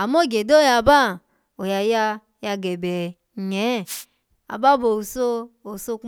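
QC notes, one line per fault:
3.85–4.05 s, wireless microphone noise hit: just after "ya ya gebe nye" the speech is hit for about 0.2 s by a swish of static, as the FM radio link fades when reflected paths cancel and the receiver's own noise rises. On a spectrogram it shows as a short broadband wash of noise over the speech harmonics; the waveform shows a brief noisy burst.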